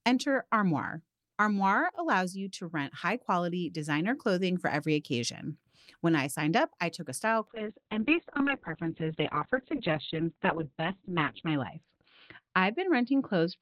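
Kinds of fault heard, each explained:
Repeated buffer: Fresh audio arrived late, so the device replayed its last chunk, which fits a 10 ms buffer. At 1.95 s a tiny slice sounds three times, giving a brief buzzy stutter.
Call bitrate drop: The call's bandwidth estimate fell and the encoder coarsened sharply, likely from near 64 kbps to 6 kbps. From 7.48 s to the end the sound turns rough and muffled, with the top limited to 4 kHz.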